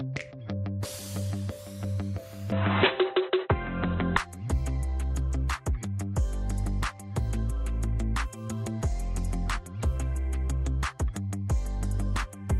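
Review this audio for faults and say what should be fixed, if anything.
From 2.52 to 4.17 s the sound turns dull and boxy, with nothing above 4 kHz, a level shift of around 5 dB and a faint new noise floor, then clears. This is likely an input switched to a poorer device, made without any silence. Locking the input device for the whole recording prevents this.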